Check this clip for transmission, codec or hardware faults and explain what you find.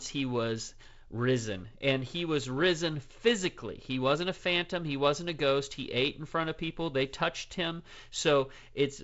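I hear no faults.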